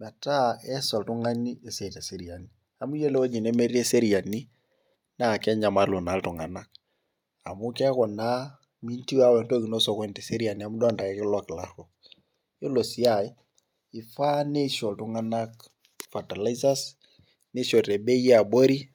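Nothing in this speech calls for a timestamp, since there isn't a single technical fault to point to anywhere along the way.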